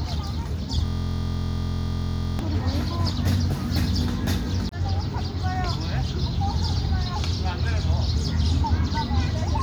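From 0.86 to 2.39 s the sound turns into a steady, droning buzz at about 43 Hz: a system hang loop. The machine stalled while the audio hardware replayed one 23.22 ms slice of its ring buffer dozens of times, which fits a 1024-sample buffer.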